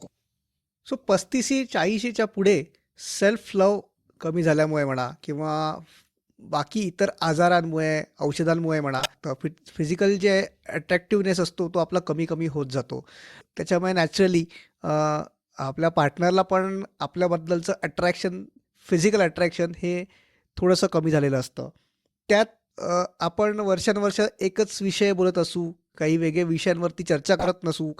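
Corrupt frames were decoded and played, putting energy at wrong frequencies: brief chirps or noise bursts at 8.98–9.12 s, faintly at 17.88–17.90 s, 24.10–24.12 s, and loudest at 27.39–27.49 s.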